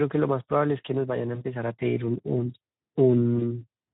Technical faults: Speex codec; VoIP packet loss concealed by the speech codec

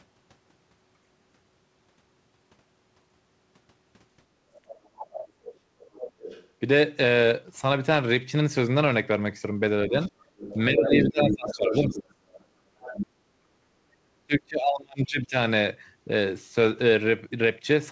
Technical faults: other side's voice leaking through; speech suppressed in double talk; background gated by the echo canceller

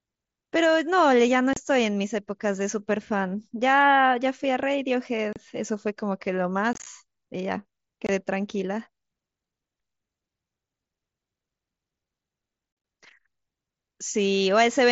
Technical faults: unconcealed Bluetooth headset packet loss

